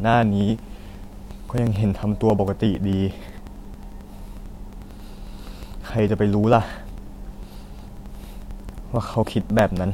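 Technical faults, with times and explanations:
0.14–9.86 s, periodic USB or driver dropouts: every 0.09 s a brief chunk of roughly 10 ms is skipped outright, about a hundred times in all, as something repeatedly stalls the audio path. Each splice joins mismatched waveform edges, producing evenly spaced ticks through the speech.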